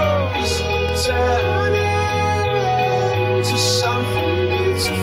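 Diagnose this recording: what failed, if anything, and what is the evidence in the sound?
A single loud pop at 0.89 to 0.91 s jumps a few dB above the sound, which continues beneath it, likely a voltage pulse from a plug or switch in the analogue wiring.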